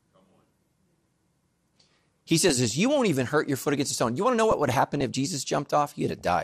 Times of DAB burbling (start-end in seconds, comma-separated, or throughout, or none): 2.49-2.71, 4.51-5.01, 6.19-6.21